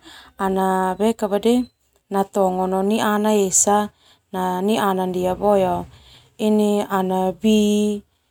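No technical faults are audible.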